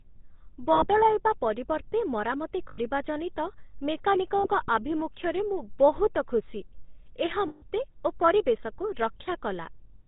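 The whole clip passes through the GSM full-rate codec at 13 kbps, which rebuilds speech from a vocal-tract model driven by coarse pulses and discards everything above 4 kHz. The result is a plainly audible buzzy, gravelly roughness with a dull, band-limited top. Lost GSM frames occur at 0.72–0.88 s, 2.69–2.79 s, 4.38–4.47 s and 7.48–7.64 s, covering about 100 ms, 100 ms, 60 ms and 140 ms. During each gap the decoder reuses the last good frame, producing a short, rough, metallic ringing smear.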